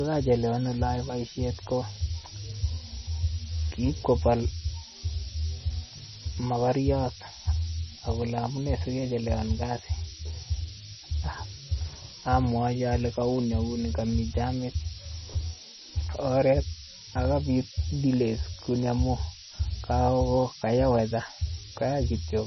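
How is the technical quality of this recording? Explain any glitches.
The technical quality is poor, with two faults running through the whole recording.

Low bit depth with noise shaping: the speech has been reduced to about 4 bits, and the rounding error is pushed upward in frequency. The result is a constant, thin hiss climbing steeply toward the treble, sitting nearly as loud as the speech itself.

The audio also has nothing above 5.9 kHz, with heavy watery, swirling artefacts and smeared consonant attacks. The likely cause is MP3 compression at a very low bitrate, around 24 kbps. Starved of bits, the encoder cuts the top band and switches weak frequency lines on and off from frame to frame.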